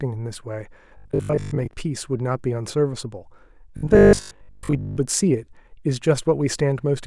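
Speech, with robotic sound from repeated short buffers from 0.97 to 1.73 s and again from 3.77 to 4.97 s. In both spans the voice becomes a rigid, metallic buzz at a fixed 50 Hz, following the speech only loosely. The likely cause is audio arriving too slowly, so playback keeps replaying a segment of about 20 ms. Roughly two thirds of each span is filled with these repeats while the missing audio is skipped.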